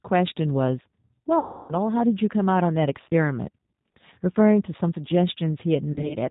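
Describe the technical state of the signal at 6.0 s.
At 6.0 s the speech falls inside a stretch of VoIP packet loss concealed by the speech codec, running from 5.92 to 6.16 s. About 100 ms of audio is missing, scattered over 180 ms, with the longest gap near 40 ms. The decoder fills each gap by extending its last pitch and filter at falling gain. That makes the speech turn into a buzzy tone or coloured noise that fades, then stay weak briefly as it recovers.

Underneath, the G.729 codec is plainly audible. At 8 kbit/s it rebuilds the speech from a vocal tract model and a few pulses per frame. Nothing above 4 kHz survives. The speech sounds dull, slightly rough and synthetic.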